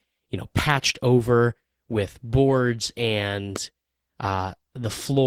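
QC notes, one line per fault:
0.59 to 0.61 s and 3.56 to 3.58 s, loud pop: single sharp thumps, the first between "you know" and "over with boards", well above the speech, which continues underneath unbroken, likely from a switching or static voltage pulse.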